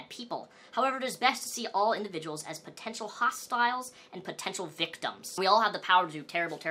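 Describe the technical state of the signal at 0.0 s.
Nothing is wrong with the signal at 0.0 s; the audio is intact at that moment.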